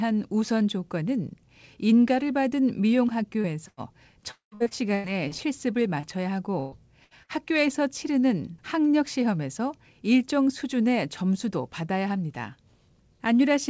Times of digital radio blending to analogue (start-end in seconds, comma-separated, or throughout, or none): none